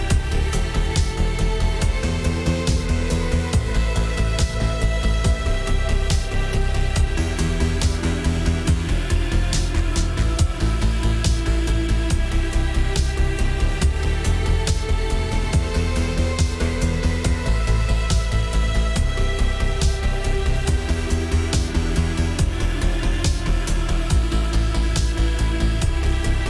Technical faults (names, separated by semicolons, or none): none